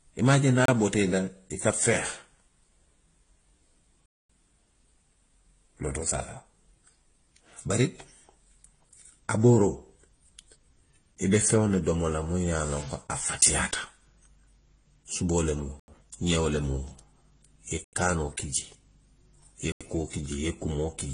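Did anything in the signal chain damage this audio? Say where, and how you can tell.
Yes. At the codec stage, the whole clip shows transcoding between lossy codecs: nothing above 10.2 kHz, with several kinds of smearing and swirl stacked together, likely from re-encoding through successive lossy formats ending in Vorbis.

At the driver or buffer stage, there are blocks of digital silence where the sound cuts out and back with no fade: 0.66 s (28 ms, after "a je niŋ"), 4.06 s (237 ms), and 15.80, 17.84 and 19.72 s (85 ms each, which fits a 4096-sample buffer). These are unfilled output buffers.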